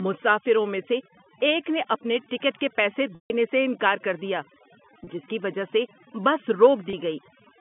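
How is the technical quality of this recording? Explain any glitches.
The quality is noticeably degraded, mainly by overdone noise removal throughout and three packet-loss gaps, carried over a G.711 telephone line limited to roughly 150 Hz to 3.5 kHz.

Overdone noise removal runs across the whole clip. A noise reduction stage set too aggressively cuts individual frequency bands whenever they approach its noise estimate, taking quiet parts of the speech with them. The background drops and breaks up into twinkling specks.

Packet loss with pitch repetition occurs at 3.15 to 3.30 s, 5.04 s and 6.9 s. Lost audio was filled by repeating the last pitch period. The first gap, about 150 ms and consistent with roughly five lost packets, fades toward silence before speech cross-fades back. The two 30 ms losses sound like brief, buzzy held tones.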